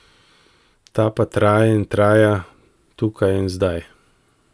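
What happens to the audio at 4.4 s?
Nothing goes wrong at 4.4 s: the speech carries on intact through that moment, with no dropout, click or distortion.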